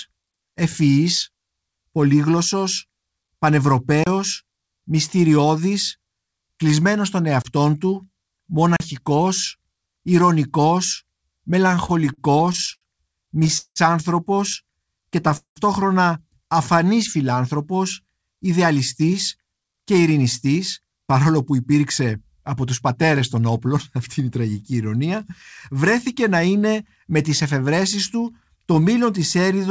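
Between 4.04 and 4.06 s, 7.42 and 7.45 s (just after "κλεισμένος των"), and 8.77 and 8.80 s, blocks of samples were zeroed. Each block of digital silence, 27, 24 and 35 ms long, is a short hole.

From 11.72 to 12.84 s, packets kept arriving late and the jitter buffer ran dry twelve times. Concealment filled 225 ms, a fifth of that span. From 13.26 to 13.79 s it ran dry five more times, filling 223 ms, nearly half the span, with the longest wait 182 ms. Nothing is lost, but these repeated stalls make the sound drag and stutter.

From 14.70 to 15.29 s, the buffer was running low, so the receiver repeated pitch periods to add 62 ms. This jitter buffer slow-down plays the sound at 91% speed without changing the pitch, so it comes out drawn out.

From 15.37 to 15.59 s, packets were likely held up in transit and the buffer emptied, causing a call audio freeze. The last sound is carried on and fades, followed by about 110 ms of silence. 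The whole pause adds 191 ms of delay, but nothing goes missing.

From 18.47 to 23.76 s, the buffer held more than it needed, so the receiver cut out short pitch-period pieces, roughly 0.4 s in total. This jitter buffer speed-up runs the sound at 107% speed at the same pitch, and it sounds hurried.

Throughout, the G.722 call path at 64 kbps leaves nothing above 8 kHz.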